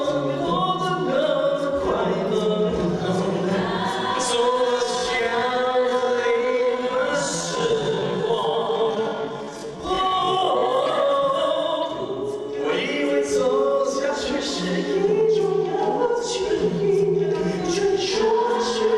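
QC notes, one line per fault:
4.67–10.89 s time-stretched section: pace abruptly slows to 0.63x at unchanged pitch, sounding dragged, likely from software repeating short pieces to lengthen it.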